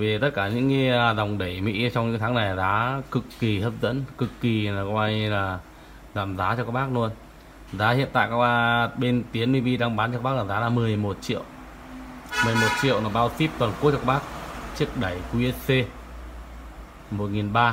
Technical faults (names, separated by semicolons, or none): none